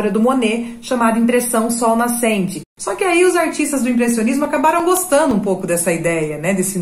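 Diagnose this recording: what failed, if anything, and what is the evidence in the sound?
The fault is at the playback and storage stage: CD scratch ticks. From 4.11 to 5.48 s there are nine brief ticks, each a few milliseconds at most, spaced evenly at roughly six per second. The steady spacing, locked to disc rotation, sets them apart from random buffer-underrun clicks. A scratch defeats error correction once per revolution, and the player interpolates or mutes the lost samples.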